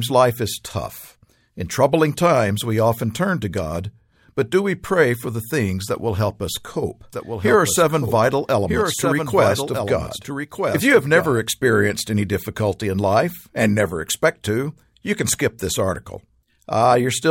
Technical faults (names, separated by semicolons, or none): doubled audio track